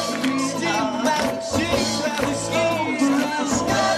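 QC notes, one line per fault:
No faults found in this clip.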